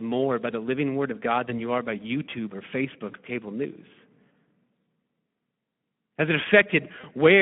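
The whole recording passed through a Speex codec at a low setting, consistent with about 11 kbps, over a line limited to roughly 150 Hz to 3.5 kHz. Starved of excitation bits, the speech comes out plainly hoarse, grainy and thin throughout.

VoIP packet loss concealed by the speech codec strikes at 1.45 to 1.54 s, just before "you are by", at 3.11 to 3.15 s, and at 7.01 to 7.06 s. Each time a single 20 ms frame went missing and the decoder extrapolated from its previous state, leaving a brief smeared stretch of buzzy tone or coloured noise that lingers past the gap.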